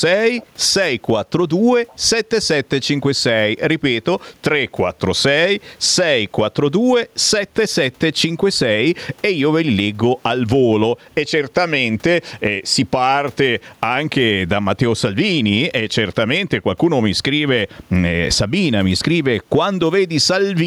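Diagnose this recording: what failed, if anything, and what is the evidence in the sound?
The level breathes up and down, a movement of roughly 10 dB that runs the whole clip, squashing loud and soft parts closer together, with the room noise about 44 dB below the speech. This gain pumping likely comes from input gain set far too high, with a fast limiter in the call processing clamping each peak.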